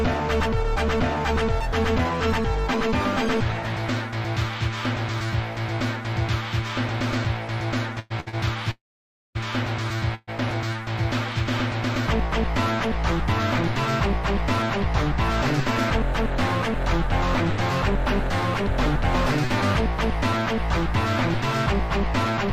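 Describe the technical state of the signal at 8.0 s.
A call audio freeze runs from 7.99 to 8.12 s. The last sound stretches into a fading buzz, likely from a starved jitter buffer. Audio then resumes, about 108 ms late, with nothing lost.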